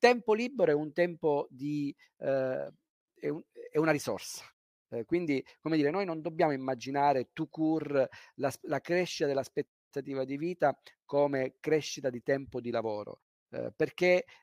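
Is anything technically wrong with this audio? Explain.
No, nothing is technically wrong.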